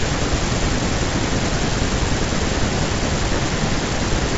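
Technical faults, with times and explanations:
No technical faults turn up here, just speech carried over G.722 wideband telephone coding at 64 kbit/s, with nothing above about 7.7 kHz.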